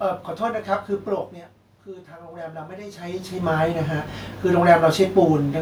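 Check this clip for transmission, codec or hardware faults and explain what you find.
One system fault is audible: automatic gain rising, from 1.85 s to 4.09 s. The speech level at the microphone has fallen by about 12 dB. The automatic gain control reads the input as too quiet. It then raises its gain by about 11 dB, slowly, across more than two seconds. The voice swells back up, and the room noise rises with it. That shared swell marks the gain stage. The talker's own moves, near 1 s and 3 s, are not faults.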